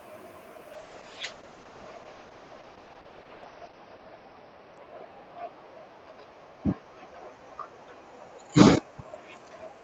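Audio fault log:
0.74–9.83 s, call bitrate drop: the encoder gets starved of bits, so the sound turns watery and muffled above 6 kHz, consistent with 32 falling to 8 kbps.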